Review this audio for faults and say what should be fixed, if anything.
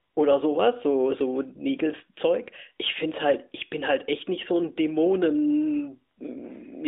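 Nothing stood out on listening, so there is nothing here that needs fixing.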